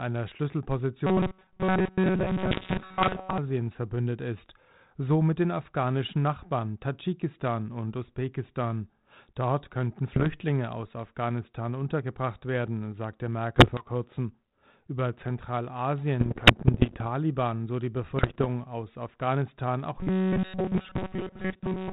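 Robotic sound from repeated short buffers runs from 1.07 to 3.38 s, ending just before "verbündet ist so mit". The speech becomes a rigid metallic buzz at 188 Hz, most likely because a roughly 5 ms buffer was replayed while most of the new audio was skipped. Inside it, bit errors on an ADPCM link from 2.50 to 3.21 s flip about one percent of the bits on the 32 kbit/s G.726 path, which is already confined below 4 kHz. Each error throws off the decoder's step size and predictor, so pops and rough bursts ring on with brief level jumps. The same errors return at 10.15 to 10.27 s, 13.56 to 13.87 s, 16.2 to 17.03 s, and 18.17 to 18.47 s just after "so die". The robotic buzz comes back at 19.99 s and runs to the end.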